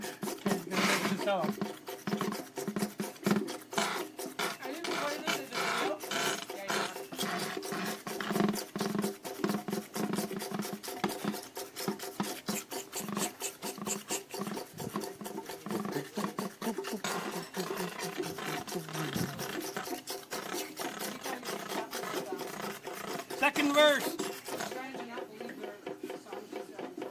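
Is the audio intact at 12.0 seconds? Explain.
Yes, the audio is intact at 12.0 seconds, with no dropout, glitch or other fault audible at that moment.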